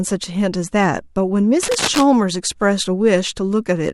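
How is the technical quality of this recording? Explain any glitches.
The recording has one clear glitch, cable scratch noise, from 1.63 to 2.05 s. A burst of uneven scratching and rustling sits over the speech at nearly the same level. The likely cause is a worn cable or connector being moved, its contact resistance jumping rapidly. A spectrogram would show dense, broadband vertical streaks there, and the waveform would look ragged and spiky.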